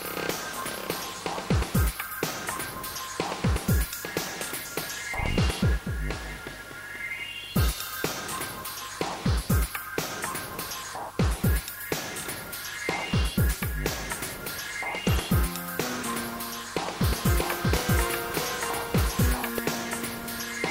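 From 17.0 s to 19.6 s a doubled audio track appears: a second, full-band copy of the sound runs about 0.7 s behind the original at roughly the same loudness, most likely from the signal being captured again through a slower path or an edit leaving two offset copies in place. Unlike an echo or reverb tail, the copy does not decay or take on any room colour, and it switches in and out abruptly at both ends.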